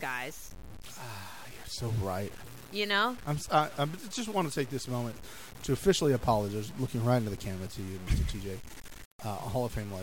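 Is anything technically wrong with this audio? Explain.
Yes. Throughout the speech, a grainy, rasping distortion rides on the signal and shifts with it, growing coarse and gritty as the level falls, with the quietest moments sputtering or cutting to silence. The error sits only about 20 dB below the speech. The likely cause is low bit depth without dither, consistent with truncation to roughly 6 bits. With so few steps and no dither to randomise the rounding, the error tracks the waveform and is heard as distortion rather than steady hiss.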